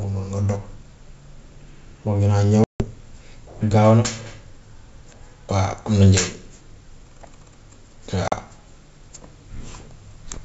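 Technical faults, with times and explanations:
2.64 to 2.85 s and 8.28 to 8.33 s, packet loss on an ADPCM call. The speech drops into hard-edged silence, about 160 ms the first time and 40 ms the second. That fits several lost packets, then a couple. Nothing is concealed, so the holes start and stop abruptly. Afterwards the decoder's predictor and step size no longer match the sender's. The speech comes back with slight distortion, then settles within tens of milliseconds.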